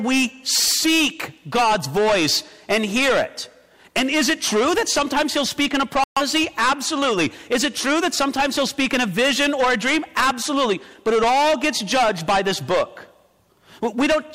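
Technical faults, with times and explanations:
throughout: hard clipping, overdriven by about 20 dB, shears roughly 15% of samples flat; squared waveform tops, with harsh fuzz spreading high on the spectrogram.
6.04 to 6.22 s: digital broadcast dropout; the receiver muted after losing what sounds like three frames, leaving a flat waveform gap and a blank spectrogram band.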